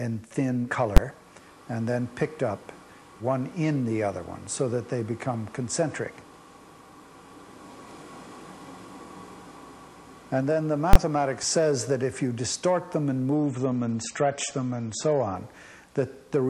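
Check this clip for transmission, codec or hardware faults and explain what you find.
Two kinds of fault are present: full-scale bursts from invalid numbers, and a stretch where an adaptive stream drops to a lower bitrate.

Invalid numbers at full scale occur at 0.97 s and from 10.93 to 10.96 s. A calculation produced infinite or invalid values that were clamped to the maximum. The first is a single bang, which fits a 512-sample block. The second, which fits a 1024-sample block, is a loud pop at each edge with nothing between. Unlike a dropout, these are slammed to full level rather than silent.

An adaptive stream at a lower bitrate runs from 13.35 to 15.35 s. The player switched to a leaner version, which sounds like roughly 32 kbit/s MP3 instead of 128 kbit/s. Nothing remains above 8.4 kHz, and swirly codec artefacts appear. Unlike packet loss, the quality changes abruptly with no gap.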